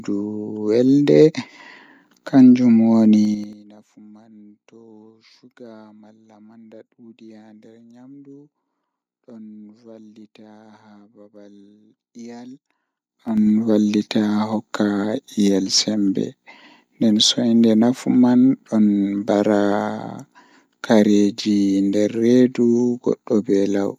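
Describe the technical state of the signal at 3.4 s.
Zipper noise runs from 3.25 to 3.62 s, so 3.4 s falls in the middle of it. The speech level is being pulled down by roughly 25 dB, but instead of gliding, the gain jumps in 6 dB steps at around ten steps a second. Each abrupt jump puts a small discontinuity into the waveform, and together these form a rapid ticking, zipping texture riding on the speech while the level drops.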